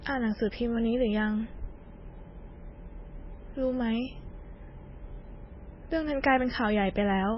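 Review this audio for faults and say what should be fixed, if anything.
Heavy MP3 compression runs throughout the speech, likely at a very low bitrate near 16 kbps. Nothing remains above 5.6 kHz, and weak detail swirls watery. Encode at a higher bitrate or keep a lossless master.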